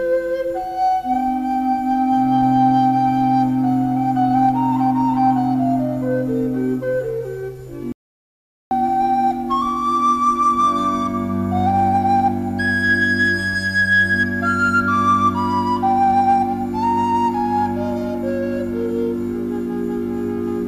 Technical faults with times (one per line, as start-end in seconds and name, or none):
7.92-8.71 audio dropout to silence